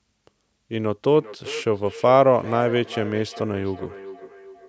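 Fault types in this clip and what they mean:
Feedback echo between two devices: a second device nearby is playing the call aloud, and its sound gets back into the first mic, where that device's echo canceller can't remove it. From about 1.1 s to the end, the speech returns roughly every 400 ms, about 17 dB below the direct sound.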